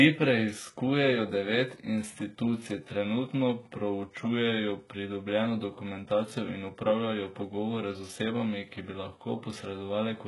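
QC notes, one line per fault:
throughout: likely HE-AAC compression. S sounds are gritty and lispy because the treble is copied up from lower bands rather than simply cut off, and it ends near 11.5 kHz.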